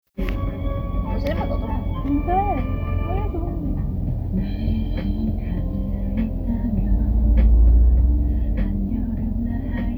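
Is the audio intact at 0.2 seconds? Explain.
Yes, the audio is intact at 0.2 seconds, with no fault present at that moment.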